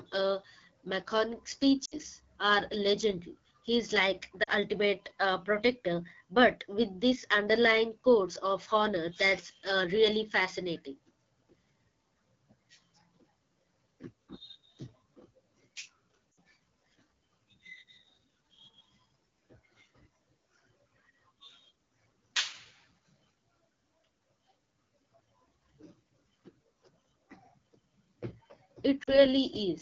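Throughout, the speech has been squeezed through the AMR wideband (HD Voice) codec at a low rate, likely its 8.85 kbit/s mode, leaving it rough and raspy.

At 1.85 to 1.94 s, 4.44 to 4.50 s, 16.31 to 16.37 s and 29.03 to 29.25 s, lost AMR speech frames force the decoder to repeat its last settings while fading. Each gap drops to near silence before the voice returns roughly.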